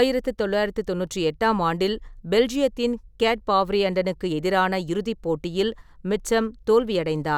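No technical faults can be heard anywhere in the recording.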